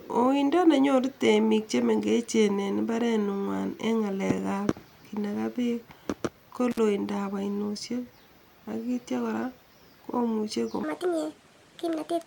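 At 6.71 to 6.79 s an intermittent contact briefly breaks the speech: a loose connection opens for about 51 ms, dropping the signal to faint hiss with crackle at each edge. The waveform shows a near-flat gap flanked by sharp spikes, and the spectrogram shows thin broadband clicks.

From 10.83 s to the end, a section at the wrong speed plays 1.51 times too fast, so the speech turns hurried and high, about seven semitones up. The likely cause is a playback clock mismatch. The spectrogram shows harmonics and formants stepping upward and syllables compressed in time.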